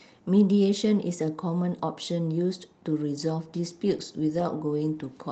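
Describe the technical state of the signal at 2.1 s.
At 2.1 s the speech is intact, with no dropout, glitch or distortion, only the ordinary coding texture and upper limit near 8 kHz of the call path it travelled through.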